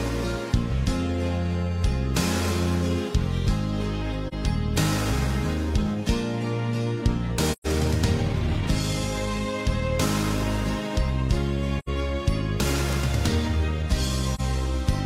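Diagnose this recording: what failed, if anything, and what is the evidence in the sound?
AAC frame loss with muting occurs at 4.28 to 4.34 s, 7.52 to 7.67 s, 11.79 to 11.89 s and 14.35 to 14.41 s. This is a codec-stage failure: the decoder zeroed the spectrum of missing frames. The gaps last about 43, 128, 85 and 43 ms, which fits whole frames of roughly 43 ms each. The overlapping windows fade the sound out and back in, leaving brief dips for the single lost frames and soft-edged holes for the runs.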